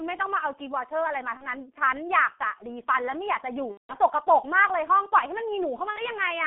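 Throughout, the G.723.1 codec confines the speech to 200 Hz–3.4 kHz. Heavy low-bitrate coding, consistent with about 6 kbit/s, leaves hoarse, blurred consonants and smeared spectrogram detail above and between harmonics.

VoIP packet loss concealed by the speech codec occurs at 1.37–1.47 s, 3.72–3.95 s and 5.90–5.99 s. The decoder repeats its last pitch and filter, giving a fading, stretched sound: a flat, repeated spectral pattern and a shrinking waveform envelope.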